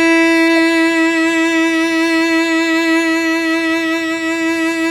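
At 0.56 s the music is broken by a brief glitch, a corrupt frame decoded: flipped bits in the compressed data were played anyway, putting energy at wrong frequencies and peaking near -20 dBFS. Unlike a plain click or dropout, it is a short burst of misplaced spectral energy, and its length suggests a few damaged frames.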